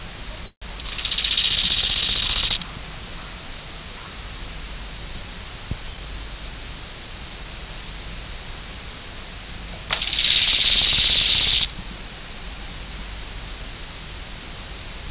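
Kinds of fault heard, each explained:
Call audio freeze: near the start, from 0.46 to 0.64 s, the sound stalls for about 155 ms. The last bit gets carried on as a fading buzz or hiss that drops to silence for the final 90 ms, then picks up exactly where it left off. That's likely packets arriving late and the jitter buffer running dry, so nothing's lost, but everything after lands 155 ms later, all through a narrowband call path with nothing above 4 kHz.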